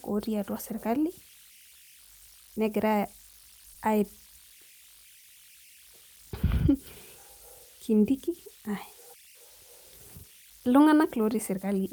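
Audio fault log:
Throughout: converter idle tones. A whistle sits around 3 kHz in the pauses, with grainy noise under quiet speech, about 27 dB below the signal. An undithered delta-sigma converter falls into repeating bit patterns when the input gets small, and those patterns produce the tone.
3.74–3.79 s and 5.20–5.26 s: short stall from a late packet. The sound briefly hangs, holding for 20 ms and then 30 ms, and nothing is lost. The jitter buffer ran dry, so the last bit of sound was stretched until the packet showed up, which pushes the delay back by the same amount.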